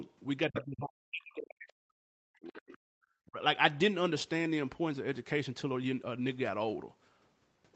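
Speech suppressed in double talk from 0.49 to 2.58 s: the speech dips by as much as about 40 dB, likely because the echo canceller, facing both sides at once, turned everything down. At 0.53 to 0.65 s the other side's voice leaks through, likely residual loudspeaker echo the canceller missed, nearly as loud as the speech, about 5 dB below it. A second, much fainter leak at 2.47 to 2.78 s sits about 25 dB down. From 2.86 to 2.97 s the background is gated by the echo canceller: the room sound drops by about 34 dB for roughly a tenth of a second while the loudspeaker plays, then returns. Speech is suppressed in double talk again from 3.25 to 3.38 s, a shorter dip of about 20 dB.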